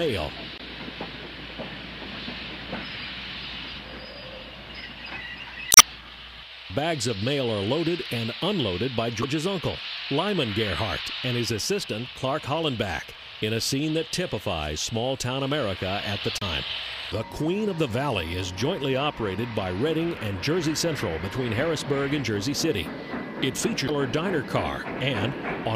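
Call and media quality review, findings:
Short bursts breaking the audio, each a chirp, squawk, click or brief hole, at 0.56–0.60 s, 5.68–5.82 s, 9.20–9.24 s, 16.38–16.43 s and 23.85–23.90 s; the one at 5.68 s is longest, about 0.14 s. Damaged data in a compressed stream: corrupted bytes in the encoded frames there, so the decoder misreads or drops them, loses sync and has to find the next valid frame header before clean output resumes.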